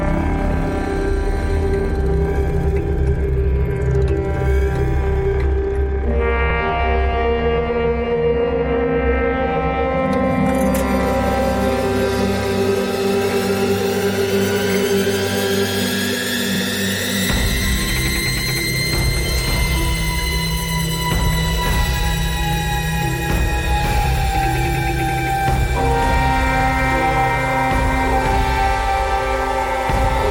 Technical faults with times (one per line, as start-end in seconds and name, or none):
6.50-6.55 overlapping chunks
16.55-16.60 overlapping chunks
26.60-26.65 overlapping chunks